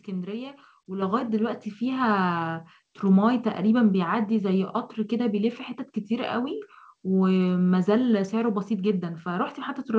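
At 1.02 s and 3.06 s the microphone volume stepped up, about 6 dB then about 1 dB, lifting voice and background together abruptly, consistent with software raising the input gain. The band-limited sound, with nothing above 8 kHz, fits a wideband call codec such as G.722.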